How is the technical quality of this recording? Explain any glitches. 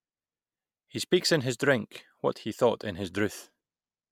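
Nothing in this recording comes across as a glitch, so there's no technical problem to explain.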